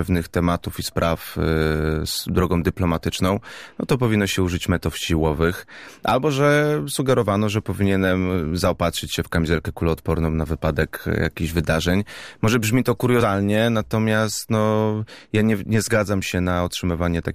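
No audible technical faults.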